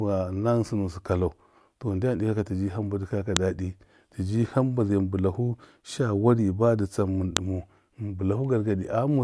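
A speech clip with file header played as audio. Sharp, loud clicks land at 3.37 s, between "dɨkɔya ka" and "dadi tiji hamba zai", and again at 7.37 s. They come four seconds apart. Each joined piece kept its WAV header, and those bytes play as a snap.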